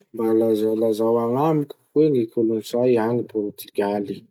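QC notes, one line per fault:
No faults heard on this speech clip.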